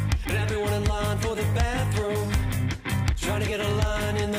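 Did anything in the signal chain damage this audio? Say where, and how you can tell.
Yes: word clock ticks run from 0.13 to 4.34 s, about fifty sharp clicks of uneven strength recurring roughly every 70 ms. The receiving converter is not locked to the digital link's clock, and a drift of a few hundred ppm slips one sample at each tick.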